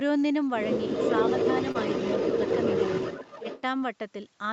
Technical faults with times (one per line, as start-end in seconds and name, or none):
0.94-3.61 echo leak
1.71-1.77 short concealed packet loss
3.41-3.45 speech suppressed in double talk